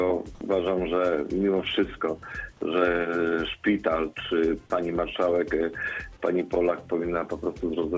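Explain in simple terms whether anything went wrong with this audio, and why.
Nothing went wrong here: the sound carries the normal signature of a wideband call link, with nothing above 8 kHz, and no fault can be heard anywhere in it.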